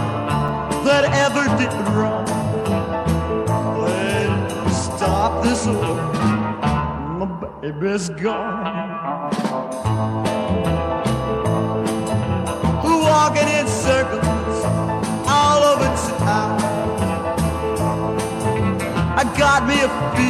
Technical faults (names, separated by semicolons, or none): block of digital silence